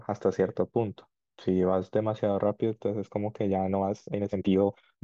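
Speech, with a time-stretched section from 3.46 s to 5.04 s, likely squeezed to fit a length. It runs 1.89 times faster and sounds rushed at unchanged pitch, so spectrogram harmonics keep their spacing while events crowd together.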